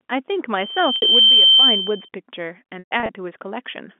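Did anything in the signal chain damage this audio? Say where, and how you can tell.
Yes. Loudspeaker feedback squeal, from the acoustic loop ahead of the converter, runs from 0.56 to 2.09 s. A 3.1 kHz tone swells over roughly 0.7 s to about 15 dB above the speech. On a spectrogram it appears as one bright horizontal line that thickens until it is cut.

Packet loss with pitch repetition comes from the network stage. At 0.96 s a 60 ms gap, which fits two lost packets, is bridged by a held, buzzy repeat. From 2.79 to 3.09 s about 180 ms goes missing in scattered pieces, the longest run 120 ms. Those stretches fade to silence. A spectrogram shows identical repeated harmonic slices, then blank gaps, all inside the G.711 telephone band.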